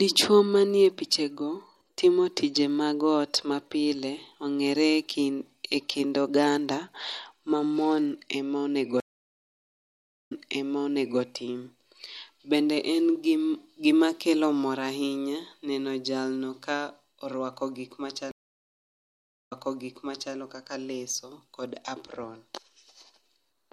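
Speech with two stream reconnects, at 9.00 to 11.21 s and 18.31 to 20.36 s. Each time the connection drops, about 1.3 s and then 1.2 s of silence follow, and a fresh decoder restarts mid-stream, its first frame or two muted or faded in. A simple dropout would pick up where it stopped, but here the server resends a burst, so playback resumes 0.91 s and 0.86 s earlier and repeats sound already heard.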